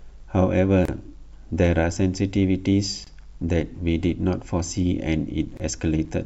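Three brief holes break the flow of speech, at 0.85 s, 3.04 s and 5.57 s, lasting about 31 ms, 25 ms and 25 ms. Each has its edges smeared by the codec, so the silent part is shorter than the gap, and the speech resumes exactly where it left off. These are gaps at the joins of encoded pieces: separately encoded sections were butted together without trimming, so each one's start-up delay and end padding survive as silence.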